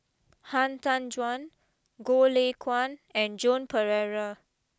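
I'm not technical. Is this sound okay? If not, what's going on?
Yes, the recording is in good technical shape, with no dropouts, glitches or other recording or playback problems anywhere in it.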